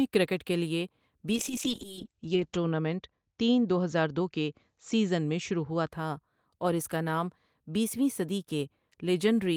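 Right after "کرکٹ کے لیے", at 1.32 s, a call bitrate drop kicks in and runs to 5.97 s. The encoder is starved, so speech turns rough and muffled, top end cut from 20 kHz to 8 kHz. The worst 1.2 s fits roughly 8 kbps.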